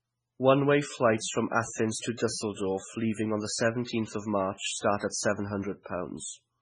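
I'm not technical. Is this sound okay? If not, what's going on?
No, it isn't quite okay. All the way through the speech, the sound is watery and swirly, as if heard through moving water, with metallic chirps on s sounds and soft, smeared starts to syllables. Nothing above about 10.3 kHz gets through, so it also sounds dull. This is likely heavy MP3 compression: squeezed very hard, the file drops the quietest details, which flicker on and off, and trims away the highest frequencies altogether.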